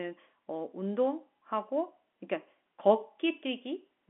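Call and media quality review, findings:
No faults found; standard telephone-band speech, nothing above about 3.8 kHz, consistent with G.711 mu-law coding at 64 kbps.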